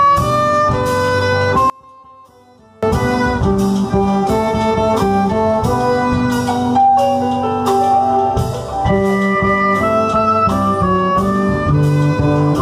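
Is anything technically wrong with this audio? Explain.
Yes. From 1.70 to 2.83 s the audio drops by about 30 dB, background included, then returns at full level. The likely cause is one channel inverted. One stereo channel had its polarity reversed before the mix to mono. Whatever the two channels shared then cancelled in the sum. Only the small difference between them survives, and that leftover residue is what remains audible during this stretch.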